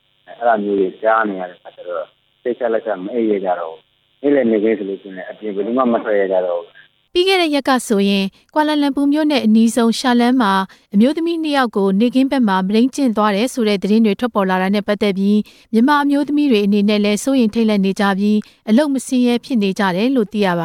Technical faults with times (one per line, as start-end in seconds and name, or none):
none